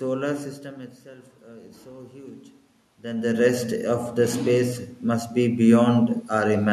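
From 1.04 to 2.47 s, after the talker moves away and the input drops by about 17 dB, the automatic gain rising lifts the level by about 4 dB, and the room noise swells with the voice. It rises again, by about 6 dB, from 3.02 to 5.37 s.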